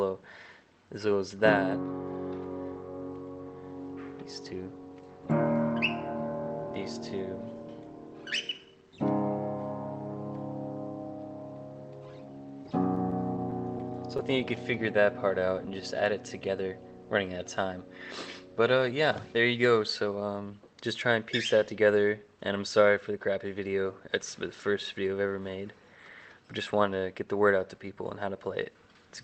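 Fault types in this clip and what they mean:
Scattered short gaps: Packets went missing or arrived late between 12.95 and 13.91 s. The receiver filled about five tiny holes, none much over 10 ms, by extending the preceding sound. These show as brief ticks and small smears in an otherwise continuous passage.
Jitter buffer slow-down: The receiver stretched the audio to rebuild its reserve by repeating short pitch-period segments. From 14.78 to 15.82 s it plays at 92% speed, adding 88 ms. From 16.24 to 16.64 s it plays at 93%, adding 37 ms. Pitch stays unchanged while sounds drag.
Jitter buffer speed-up: The buffer held too much audio, so the receiver trimmed short pitch-period pieces to cut delay. Between 18.67 and 19.66 s it runs at 109% speed, dropping roughly a tenth of a second. Pitch holds steady but the passage sounds hurried.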